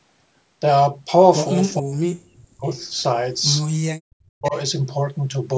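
From 1.8 to 2.65 s the speech sinks sharply, at its deepest by about 40 dB. That's speech suppressed in double talk, most likely the echo canceller hearing both sides at once and clamping down on everything. Right after, from 2.67 to 3.02 s, a faint echo leak comes through: a copy of the voice about 478 ms late and about 15 dB down, probably from a speakerphone whose canceller let some of its own playback back into the mic. The same double-talk suppression hits again from 3.95 to 4.54 s, and just as it ends, from 4.44 to 4.56 s, another short scrap of that 478 ms echo slips through at about 20 dB below the speech.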